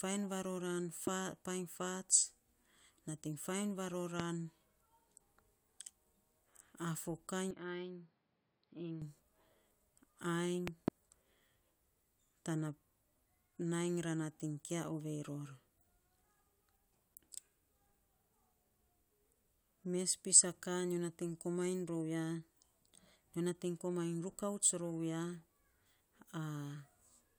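A speech recording with two kinds of fault. Loud pops sit on top of the continuing speech at 1.07 to 1.10 s (about 15 dB above it), 4.20 to 4.22 s and, as a double pop, 10.68 to 10.90 s (both about 20 dB above), likely electrical transients from a plug, switch or static rather than clipping, since the speech underneath is untouched. From 7.51 to 9.02 s the input is switched to a poorer device, likely a different microphone or headset profile: the sound turns dull, with nothing above 5.4 kHz, drops about 10 dB and gains a noise floor about 35 dB down, with no gap at the switch, which sets it apart from a simple filter or a dropout.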